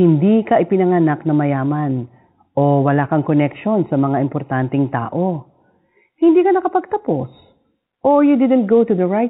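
No technical faults are audible.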